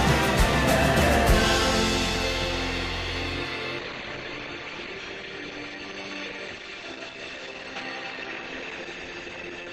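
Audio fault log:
3.79–9.72 s, adaptive stream at a lower bitrate: at 3.79 s the quality drops abruptly with no gap or dropout, and it stays degraded to the end. Content above about 8.7 kHz disappears, leaving the top end dull, while codec artefacts become audible. The stream has switched to a lower-bitrate rendition, likely after the connection slowed, and the change in sound fits a move from around 64 kbit/s Opus down to around 16 kbit/s.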